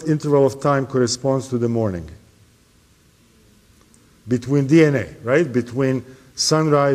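Nothing stood out as a technical problem on listening.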